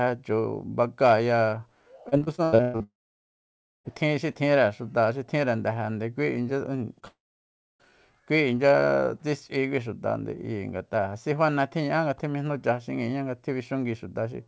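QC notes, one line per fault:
2.09–2.83 s: repeated packet loss (robotic sound). Eight separate holes open in the speech over this stretch, the longest about 121 ms, and roughly half of the span is rebuilt rather than received. Each gap is bridged by extending the preceding sound, and the next gap arrives before the real signal settles. The speech turns choppy and mechanical, with fragments missing between the patched pieces.
2.83–3.87 s: long network dropout. About a second of audio goes missing straight after the choppy run. The receiver carries the last sound forward briefly as a fading buzz, and then around 0.93 s of near silence follows before the speech resumes, with the lost portion simply absent. The likely cause is a stall in the network path, longer than concealment can cover.
6.99 s: short concealed packet loss. Roughly 30 ms fails to reach the decoder in time and is filled by extrapolating from the sound just before, then blended back into the received signal. 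It registers as a brief smear or wobble in the speech, with a short sound possibly lost under the patch.
7.08–7.92 s: long network dropout. Arriving only a few hundredths of a second after the short loss, this gap removes about 0.72 s. A short fading continuation of the last sound gives way to roughly 0.63 s of silence, and the speech picks up afterwards without the missing part. The likely cause is again a network interruption, here shorter than the earlier one. The G.722 call path limits the audio to nothing above 8 kHz.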